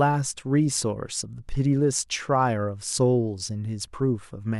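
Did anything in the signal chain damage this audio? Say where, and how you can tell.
No, nothing in the signal chain has left an audible mark on this speech recording. Listening closely, there is no moment where any stage from capture to playback leaves evidence that could be pinned to a time.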